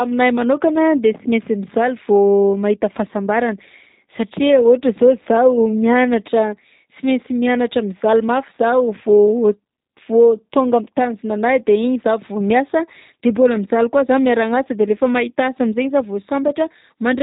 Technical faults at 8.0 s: G.729 codec

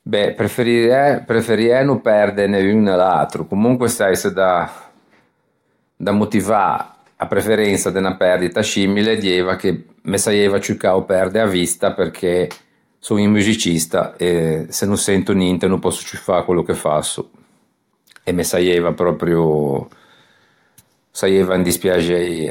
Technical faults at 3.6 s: none

